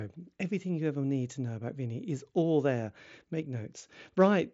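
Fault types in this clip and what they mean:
No technical faults present.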